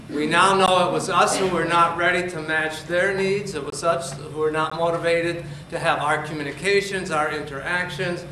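Three blocks of digital silence break the audio: a 16 ms hole at 0.66 s, a 21 ms hole from 3.70 to 3.72 s, and another 16 ms hole at 4.70 s. Each is a hard drop to silence and back with no fade. The longer gap fits a missed 1024-sample buffer.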